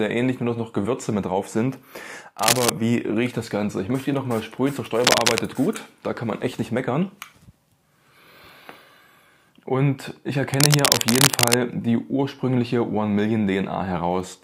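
Cable scratch noise at 2.39 to 2.71 s, 5.02 to 5.39 s and 10.54 to 11.54 s: dense, uneven rustling roughly as loud as the sound or louder, likely from a worn cable or connector being moved, not isolated clicks.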